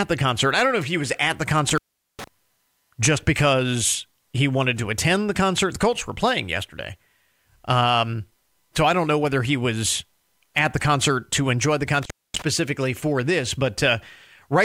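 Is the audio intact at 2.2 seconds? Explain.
No. At 2.2 s the speech is inside an intermittent contact dropout running from 1.69 to 2.28 s, just after "he was at the". A loose connection opens for about 0.41 s, so the signal cuts to faint hiss with crackle at each edge. The waveform collapses to near-flat, bracketed by sharp spikes, and the spectrogram shows a dark gap with vertical broadband streaks at the edges.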